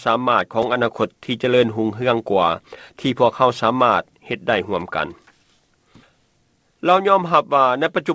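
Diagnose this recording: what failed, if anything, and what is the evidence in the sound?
A single sharp tick at 0.63 s, where the audio drops to digital silence for 2 ms and snaps back without a fade. This block of digital silence points to the buffer stage: an output buffer went unfilled, which fits a 32-sample block at 16 kHz.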